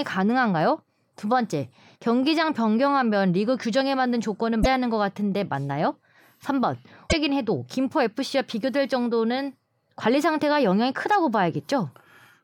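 Damaged data in a compressed stream at 4.60–4.66 s and again at 7.07–7.13 s makes the decoder misread corrupted frames and lose sync, giving brief glitches in the speech.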